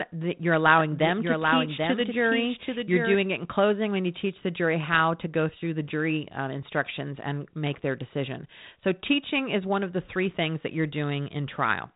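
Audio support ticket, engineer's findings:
Doubled audio track, 0.79–3.15 s: dry full-band copy about 5 dB down, roughly 0.7 s late, abrupt start/stop; spectrogram shows shifted duplicate. Likely second, slower capture path.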